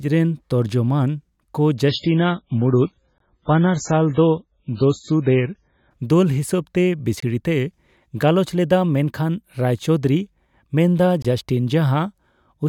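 From 1.89 to 5.91 s the speech abruptly turns dull, with nothing above 7.6 kHz and stronger coding artefacts, yet there is no break. It is an adaptive stream at a lower bitrate: the player switched to a weaker version mid-stream, consistent with a drop from about 128 to 16 kbit/s MP3. At 3.18, 7.20 and 11.22 s, hard-edged holes of silence about 21 ms long cut into the speech, spaced about 4 s apart. Each is a gap between chunks: the audio arrived in 4-second pieces, and silence was left at every join while the sound itself stayed intact.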